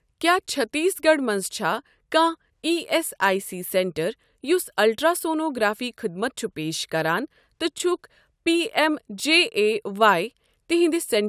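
No technical faults are audible.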